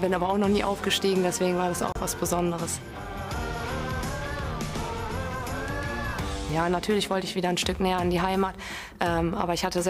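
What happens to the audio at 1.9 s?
From 1.92 to 1.98 s the audio cuts to silence, then resumes further on, as if it kept playing. This is likely a Bluetooth dropout, consistent with about two lost frames.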